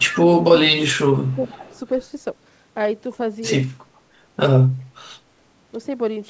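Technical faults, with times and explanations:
0.0–0.21 s, echo leak: a faint delayed copy of the speech, trailing by 419 ms and sitting about 15 dB below it. This is likely a loudspeaker-to-microphone path at the far end that the echo canceller failed to remove fully.
0.61–1.5 s, speech suppressed in double talk: the talker's level dips in pieces, by about 20 dB at its deepest, for roughly half a second in total. The likely cause is the echo canceller mistaking overlapping talk for echo and attenuating both.
1.26–1.79 s, echo leak: the same 419 ms delayed copy returns, weaker at about 25 dB below the speech and overlapping the end of the suppressed stretch. This is likely residual echo slipping past the canceller during simultaneous talk.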